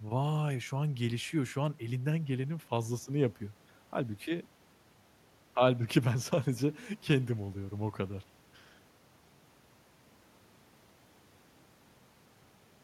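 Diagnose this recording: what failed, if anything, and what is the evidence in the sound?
Nothing failed; no faults heard.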